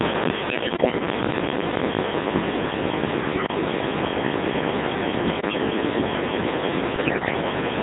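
From start to finish the speech passes through a Codec 2 vocoder, and the damage is heavy. The decoder does not carry the waveform. It rebuilds the voice from sine waves driven by pitch, voicing, energy and a spectral envelope, so the result sounds robotic and buzzy. The coarseness points to a rate of roughly 1.6 kbit/s, and the band is limited to about 150 Hz to 3.7 kHz.

Bit errors on digital voice radio then disturb the sound four times: from 0.49 to 1.05 s, from 3.36 to 3.54 s, from 5.28 to 5.58 s, and from 6.96 to 7.42 s. At such a low rate every bit sets a whole frame's pitch, level, voicing or spectrum. Error rates of several percent, nearer ten in the last burst, make the synthetic voice lurch in pitch and loudness and break into warbles, bleeps and gibberish.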